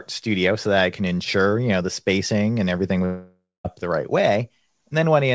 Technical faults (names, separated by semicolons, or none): long network dropout